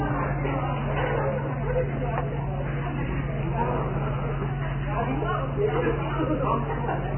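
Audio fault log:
throughout: Vorbis compression, likely at a very low bitrate near 10 kbps, removes everything above 3 kHz and quantises the remaining upper band so coarsely that fine detail turns into noise, leaving the sound dull, heavily hissy and grainy, with roughened tones and blurred attacks.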